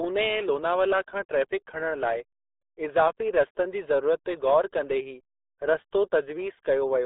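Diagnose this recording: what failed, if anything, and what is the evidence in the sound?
The failure is at the codec stage. Throughout the speech the band is squeezed to roughly 300 Hz to 3.7 kHz, with nothing at all above 3.9 kHz, and the voice has a heavy gargling, muffled texture. That pattern fits the RealAudio 14.4 codec, whose very low bit budget, consistent with an 8 kbit/s stream, forces coarse modelling of the voice. A plain telephone-band filter would sound narrow but clean; here the gargly smearing shows lossy coding damage as well.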